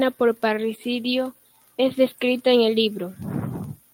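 Nothing goes wrong here at any point; the speech just carries on steadily with no faults to point to.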